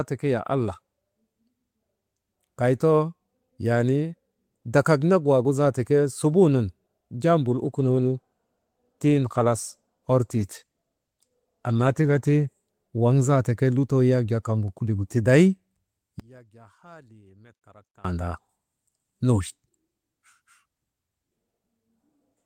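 From 7.51 to 12.51 s there is a call bitrate drop. The encoder falls from 32 kbps to 16 kbps and stays low for about 4.9 s. The speech codes more coarsely there. It sounds rougher and watery until the rate recovers.

From 16.20 to 18.05 s the speech almost disappears, falling by about 30 dB. What remains is faint. The likely cause is one channel inverted, so the centred voice cancels when the two channels are summed to mono.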